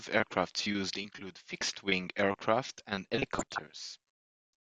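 A speech clip in which weak DAB reception lets bit errors slip past error correction into the MP2 audio data, producing DAB burbling twice. Corrupted samples put short blips of noise in single sub-bands, and corrupted scale factors make sub-bands jump in level for up to a frame. From 1.61 to 1.73 s, after "aircraft used include" and before "aircraft and", a brief burst of burbling appears. From 3.23 to 3.68 s, following "aircraft and", a longer stretch of burbling fits a somewhat higher error rate.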